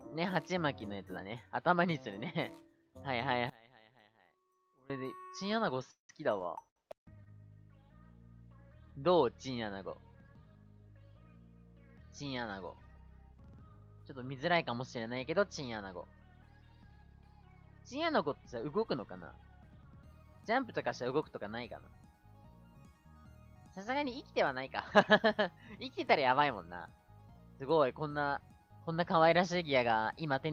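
At 3.50 s the sound suddenly drops by about 24 dB and stays hollowed out until 4.90 s. What's left is faint, as if the middle of the mix has been scooped out. The likely cause is one channel inverted: with one side's polarity flipped, everything the two channels share cancels when they're folded to mono. Only the small difference between them gets through, which is why it goes faint rather than just quieter.

Shortly after, from 5.77 to 7.29 s, you get repeated stalls, a stutter. Packets were arriving late, so the jitter buffer kept running dry, four times in that stretch. Each time the receiver stretched the last bit of sound to cover the wait, about 281 ms in total, roughly a fifth of the span. The longest hold was 182 ms, so that one sags and fades a little. Nothing actually drops out, but the flow drags and hiccups.

Later, between 18.64 and 19.13 s, there's a jitter buffer speed-up. 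The buffer had built up more audio than it wanted, so the receiver trimmed it down by cutting out lots of tiny pitch-period slices in quick succession, about 40 ms in total. Playback runs at 106% for that half second with the pitch unchanged, so it sounds briefly rushed, a little pushed forward, then settles back to normal pace.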